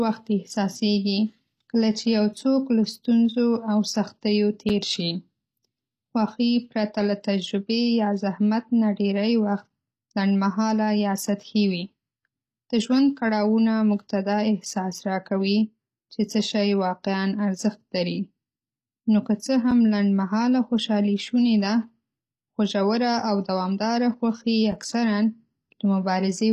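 A speech clip with two faults. Throughout, nothing sounds above 14.9 kHz, and the codec damage is plainly audible in the treble. This is likely HE-AAC compression at a low bitrate, consistent with about 24 kbps. That codec keeps only the lower spectrum and rebuilds the top by spectral band replication. It copies lower bands upward under a coarse envelope. The rebuilt treble is not the original, so its harmonics do not line up with those below the crossover. At 4.69 s, just after "له ستونزو او سختیو", there is a gap between chunks. A hole of about 6.5 ms breaks the sound at a join. This fits audio handled in 5-second chunks, with silence left between them. No sound is lost, but the flow is briefly interrupted.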